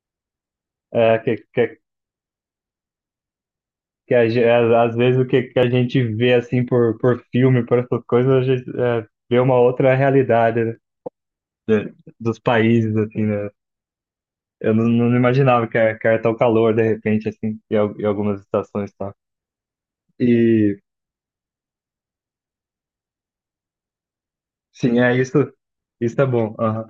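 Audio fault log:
5.63 s, audio missing between chunks: a brief skip in the speech, with the material on either side butted together and no gap of silence. Only a very small slice is lost, a few milliseconds, so the jump is short and does not swallow a whole syllable. The likely cause is a recorder or processor handling the audio in fixed blocks and dropping a sliver at a block boundary; the position fits a boundary in a chain working in 6-second chunks.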